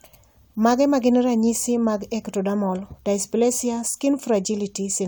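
Speech recording, no technical faults detected.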